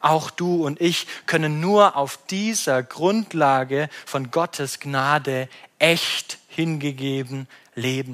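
No technical faults are audible.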